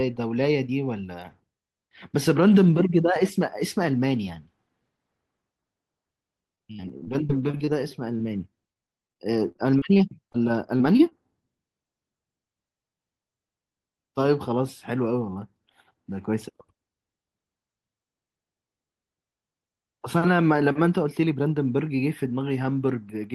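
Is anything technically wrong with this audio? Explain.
Yes. Two stretches of repeated packet loss give the speech a robotic sound, from 6.55 to 7.69 s and from 8.73 to 10.36 s. Each has eleven gaps, the longest about 43 and 35 ms. The receiver patches each hole by extending the last sound. About a fifth and a seventh of each stretch is filled this way. The result is choppy.

Short concealed packet loss follows at 10.78, 10.97 and 11.09 s. Each time roughly 20 ms of audio never arrived. The decoder continued the preceding sound briefly and blended back. Each gap is heard as a quick smear or wobble.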